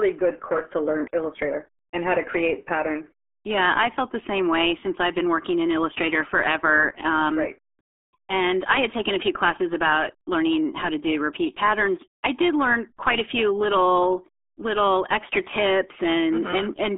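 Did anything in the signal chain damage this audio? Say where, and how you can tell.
Yes, at the codec stage. RealAudio 14.4 damage runs throughout and makes the speech muffled and gargly. The spectrogram is empty above 3.7 kHz, which fits a starved 8 kbit/s coder.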